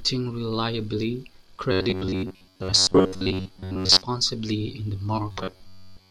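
From 1.72 to 4.02 s, and again from 5.32 s after "in the" to the end, the speech becomes a rigid metallic buzz near 94 Hz: robotic sound from repeated short buffers. Audio likely arrived too seldom, so roughly 11 ms chunks looped, replacing most of it.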